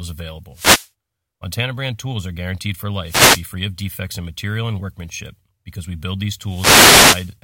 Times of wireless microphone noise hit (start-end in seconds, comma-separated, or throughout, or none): 0.52-0.90, 3.03-3.45, 6.44-7.35